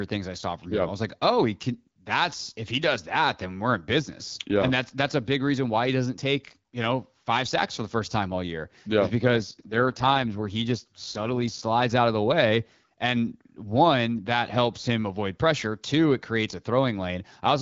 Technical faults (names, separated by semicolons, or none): AMR rate drop